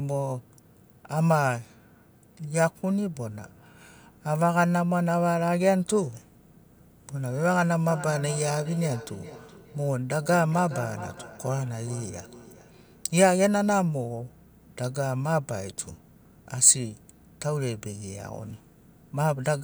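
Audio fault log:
7.89–13.13 s, feedback echo between two devices: from about 7.9 s each phrase comes back again roughly every 0.4 s, thinner and with a ringing edge, peaking at about 15 dB below the speech. It sounds like two devices in the same room on one call, with one playing out what the other's mic sent and that mic catching it again. Each echo canceller only removes its own playback, so the loop keeps going until it clears at 13.13 s.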